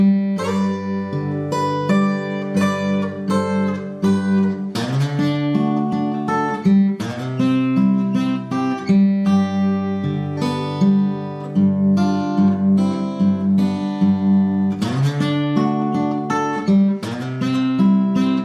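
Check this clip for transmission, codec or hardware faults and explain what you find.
Nothing in the clip points to a fault of any kind. There is no event here that calls for a closer look or an explanation.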